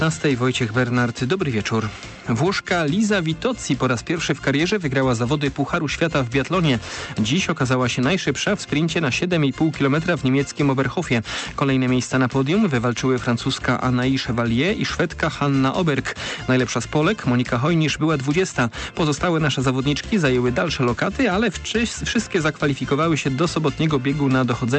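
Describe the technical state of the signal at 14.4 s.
At 14.4 s the signal is intact, with no dropout, glitch or other fault, and the call path is working normally there.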